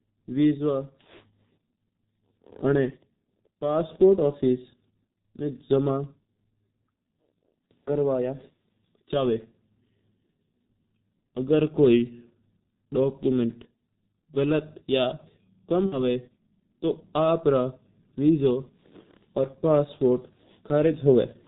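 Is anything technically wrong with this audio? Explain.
Yes, there are two faults. Throughout the whole clip of speech, the G.723.1 codec is heavily damaging the sound. Near the 16 s mark, VoIP packet loss concealed by the speech codec adds a brief, separate disruption.

The G.723.1 coding runs for the full length of the clip. The codec describes the voice with a simple model that it refreshes only once every 30 ms frame, and the rate here points to its 6.3 kbit/s mode. Nothing above 4 kHz gets through, so the speech is muffled and hoarse and its consonants are smeared. Because the damage is steady and present everywhere, it cannot be mistaken for a dropout.

From 15.86 to 16.03 s, the packet loss concealment takes over. Roughly 60 ms of audio went missing, which fits two lost 30 ms frames. The decoder filled the gap by extending its last pitch and filter settings and turning the level down with each frame. 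You hear the speech stretch into a fading sound, and it stays weak or distorted for a short while after real data resumes. That gradual recovery sets it apart from a clean cut to silence.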